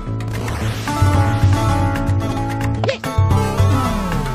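The audio carries a doubled audio track from 0.65 to 2.79 s: a full-band second copy runs roughly 0.7 s behind, about 5 dB quieter, likely from a second, slower capture path. Unlike an echo or reverb, it has no decay or room colour and cuts in and out abruptly. From 2.27 to 2.37 s, frames out of order swap two neighbouring runs of about 46 ms each, which fits two-frame blocks. This leaves a garbled flutter. Unlike a dropout, no time goes missing.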